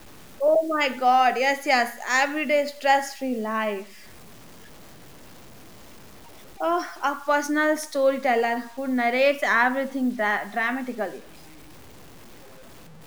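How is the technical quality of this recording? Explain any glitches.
The technical quality is poor. A grainy distortion runs through the whole speech clip. It sounds like low bit depth without dither. The likely cause is truncation to about 7 bits with no dither added. Each sample is cut down to a coarse step. The error therefore tracks the signal rather than forming steady hiss. Quiet syllables turn gritty, and the softest tails sputter or drop out. The distortion sits roughly 25 dB below the speech.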